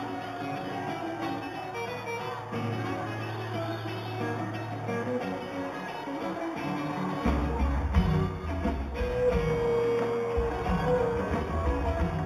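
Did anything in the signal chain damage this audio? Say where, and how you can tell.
Yes. Imaging from linear upsampling runs through the whole clip, introduced at the sample-rate conversion stage. The content tops out near 4 kHz, and a fainter mirrored copy fills the 4 kHz to 8 kHz band, roughly 30 dB below the signal, heard as a light metallic shimmer on the brightest sounds. That pattern points to 8 kHz audio raised to 48 kHz by straight-line interpolation, a weak filter that dulls the top of the band and lets spectral mirror images through.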